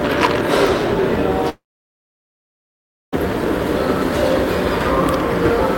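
At 1.49 s the sound breaks off and does not return until 3.17 s, a gap of about 1.7 s that is likely a long network dropout. The receiver first carries the last sound forward as a short fading buzz, then leaves about 1.5 s of near silence. When audio resumes, roughly 0.9 s of material is simply gone, and playback has shifted by around 0.7 s.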